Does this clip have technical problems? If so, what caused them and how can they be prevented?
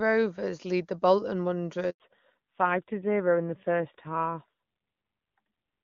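Yes, two related ones, both right after "lead the bolton". First there's a handover gap from 1.90 to 2.00 s. The call gets passed from one network link to another, and for those 100 ms no speech frames make it through. The sound drops out fast and stays dead until the new link picks up, so whatever fell in that window is simply gone. You can prevent it with a network configured for make-before-break handovers and decent cell overlap, so frames keep flowing during the switch.

Then from 2.00 s to the end the call falls back to narrowband. Before the gap it's clean HD Voice, which fits AMR-WB at 23.85 kbit/s with little or no codec damage. After it, nothing above 4 kHz survives, and the speech turns duller and rougher, which fits AMR-NB at 7.4 kbit/s. The new link likely didn't support the wideband codec, so the call renegotiated down. You can prevent it by making sure both networks involved in the handover support AMR-WB end to end, so the codec doesn't have to step down.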